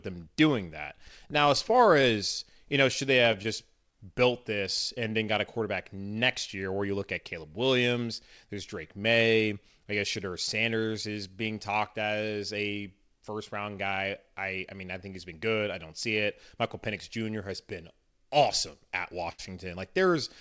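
Clock drift between sender and receiver runs through the whole recording. The sending side's clock is slow by roughly 3 percent relative to the receiver, so the jitter buffer keeps draining instead of holding a steady level. The receiver has to keep producing more audio than arrives, and the result is a slightly loose, unsteady timing across the speech rather than any single obvious defect.

From 0.20 s to 18.89 s, that drift is handled by repeated timing corrections. The receiver inserts short repeated or stretched pieces, always in the lengthening direction, at uneven spacing. This effectively plays the speech at 97 percent of its natural pace and adds about half a second over the stretch. Each edit is small, so it comes across as faint hiccups and a slightly dragging rhythm rather than distinct glitches.

Between 1.08 s and 2.05 s there are scattered short gaps, about four of them, where packets were late or lost. 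Each hole, the longest around 15 ms and together roughly 40 ms, was concealed by extending the preceding sound. Nothing is actually missing. The passage stays intelligible but carries tiny ticks and smeared transitions.

A short stall from a late packet occurs at 19.32 to 19.40 s. The buffer ran empty, and the receiver held the last sound for 63 ms until the packet arrived, then resumed from the same point with no content lost. The held sound comes with a slight buzz or dip, a momentary freeze before the speech continues. This happens on a G.722 path at 64 kbps, which carries nothing above 8 kHz.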